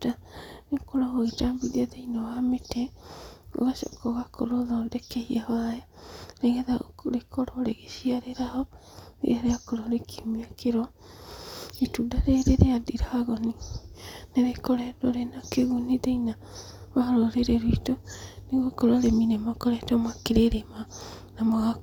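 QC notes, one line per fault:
14.04–14.12 s, chunks out of order: right after "rĩrĩ rĩa ndiragoni" and before "nĩrĩkoretwo rĩna kĩguni thĩinĩ", a 20 ms block of speech turns up three blocks late, playing after the 60 ms of audio that should follow it. Nothing goes missing, but the jumbled sequence sounds like a brief garbled moment. On the waveform, three abrupt discontinuities sit at the start, 60 ms in, and at the end of that 80 ms span. The spectrogram shows thin vertical broadband lines at each join, with the harmonic pattern stepping out of its natural progression between them.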